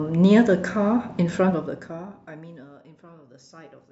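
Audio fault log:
1.37 to 2.73 s, zipper noise: the speech gets pulled down by roughly 25 dB over that stretch, but in hard 1 dB jumps instead of a smooth ramp, about twenty a second. Each jump snaps the waveform to a new level and leaves a tiny click, so you hear a fast ticking, zippy buzz riding on the speech while the level drops.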